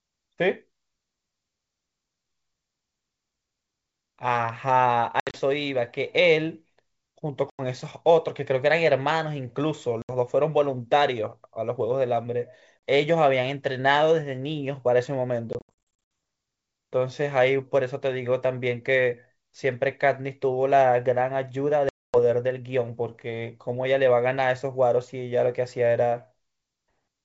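Packet loss on an ADPCM call drops audio at 5.20–5.39 s (110 ms), 7.50–7.61 s (90 ms), 10.02–10.13 s (70 ms), 12.79 s (40 ms), 15.53–16.00 s (360 ms) and 21.89–22.16 s (250 ms). The decoder's predictor and step size desynchronise, so each hard-edged silent gap returns slightly distorted before settling.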